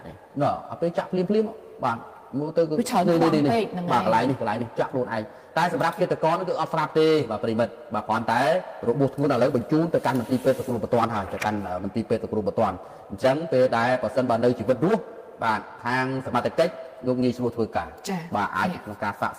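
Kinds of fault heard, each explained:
No technical faults are audible anywhere in the audio.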